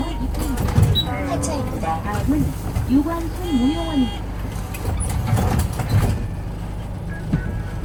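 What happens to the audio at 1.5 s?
At 1.5 s, as throughout the clip, the sound carries two different sets of compression artefacts at once, most likely from transcoding between lossy codecs. The chain points to an MP3 encode at around 96 kbit/s, re-encoded with Opus at around 48 kbit/s. The second codec spends its bits on the first codec's artefacts and adds its own, so both are audible together. Nothing remains above 20.2 kHz.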